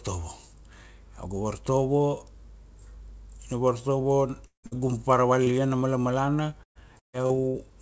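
At 4.46 s the speech smears into a fading buzz or hiss, then goes quiet for about 110 ms before picking up again at 4.66 s. That's likely a long network dropout: around 180 ms never arrived, and the receiver stretched the last sound briefly before giving up.

Right behind it, from 4.66 to 4.74 s, comes a burst of packet loss. Another 60 ms or so went missing, patched by continuing and fading the previous sound, so you hear a brief held buzz or fading hiss and then the speech jumps ahead.

At 5.43 to 5.49 s, just before "a malamalana", there's short concealed packet loss. About 30 ms didn't reach the decoder in time, and the fill shows up as a quick smear or wobble as the patched bit blends back into the real audio.

From 6.63 to 7.57 s, after "a malamalana", it turns choppy and robotic: repeated packet loss. Five separate gaps, the longest about 140 ms, add up to roughly 360 ms lost, so nearly 40% of that stretch is concealment, heard as a choppy stutter with pieces dropped. 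All of this rides on a call path with nothing above 8 kHz, which fits G.722 at 64 kbps.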